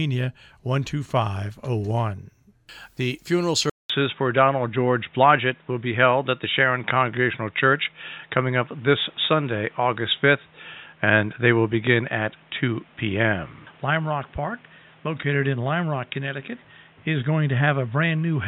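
At 3.7 s the sound drops out for about 200 ms and returns duller and boxier, with nothing above 3.8 kHz for the rest of the clip. This is most likely an input switched to a poorer device, such as a headset's call profile, in mid-recording. The brief gap and a different background hiss, about 35 dB below the signal, set it apart from a simple filter or codec bandwidth drop, while the overall level stays roughly the same.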